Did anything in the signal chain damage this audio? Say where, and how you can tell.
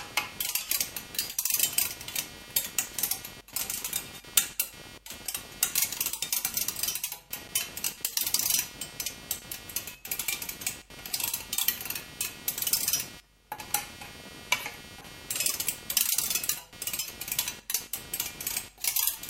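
Yes. Computer activity noise enters at the analogue wiring stage throughout: buzzing pulses around 200 Hz, roughly 15 dB below the sound, from processor or graphics load moving the shared ground. On a spectrogram it appears as regularly spaced vertical striations.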